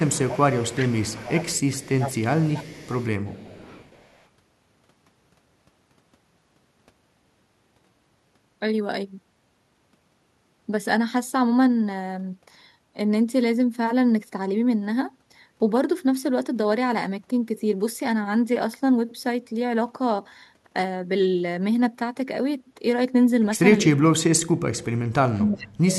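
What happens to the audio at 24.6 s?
At 24.6 s the speech is caught in speech suppressed in double talk, spanning 23.82 to 24.86 s and dropping by roughly 40 dB. The likely cause is an echo canceller mistaking simultaneous far-end talk for echo and turning everything down. Unlike packet-loss dropouts, which leave brief gaps, this is a sustained duck lasting about a second.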